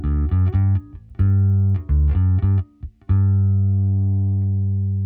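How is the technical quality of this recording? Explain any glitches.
One glitch affects the recording. From 0.3 to 2.1 s, a resampler restarted on every block converts each 100 ms block without its neighbours, leaving 10 Hz ticks that, unlike dropouts, never break the sound.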